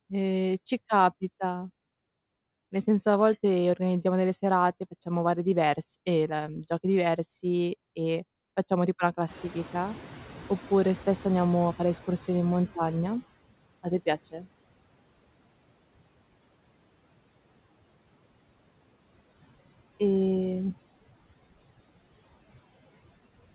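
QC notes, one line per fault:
throughout: noise suppressor artifacts. The suppressor estimates the steady background in each frequency band and turns those bands down frame by frame, here by about 21 dB, so the room noise dips in the gaps and swells back beneath the speech. Unlike a lagging estimate, this pumping is present from start to finish rather than confined to one stretch after a change in the noise.
9.28–13.29 s: noise suppressor catching up. The room noise jumps by about 18 dB at around 9.5 s, and the suppressor's estimate is still tuned to the quieter background, so the louder noise passes through with too little reduction at first. Over about 4 s the estimate adapts and the noise sinks again, ending about 19 dB down. What sets it apart from the steady artifacts is this clear slide from loud to quiet, beginning right at the rise in background level.
14.31–14.47 s: speech cut by the noise suppressor. 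Here the suppressor mistakes part of the speech for background and pulls it down along with the noise, by as much as about 18 dB, for roughly a tenth of a second. That stretch of speech sounds swallowed and faint. Unlike the steady artifacts heard throughout, this is a short, sharp dip in the speech itself.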